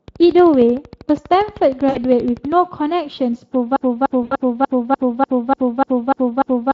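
Speech, coded throughout with the Speex codec. Its damage is plainly audible: the voice sounds hoarse and grainy, and the top band is a thin noisy fill. The character points to a mid-range setting near 20 kbps. From 0.08 to 2.53 s a train of clicks ticks over everything, pauses included. The clicks come at a regular pace of about 12.7 per second, roughly thirty in all, peaking a few dB above the speech. Nearby interference or a faulty connection is the likely source. Twice there is VoIP packet loss concealed by the speech codec. About 60 ms is lost at 1.89 to 1.99 s, and about 80 ms at 4.23 to 4.35 s. The decoder extends the last pitch and filter into a fading sound, and the voice stays weak briefly afterwards. From 3.76 s to the end, a broken-record loop repeats a 0.3 s fragment ten times back to back. The speech that belonged there is gone. A stalled player or stream is the likely cause.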